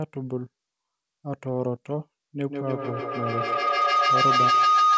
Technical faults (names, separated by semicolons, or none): feedback howl